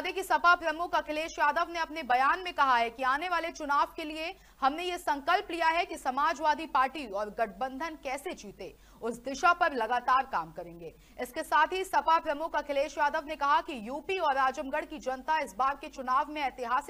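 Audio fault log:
No fault is logged for this clip.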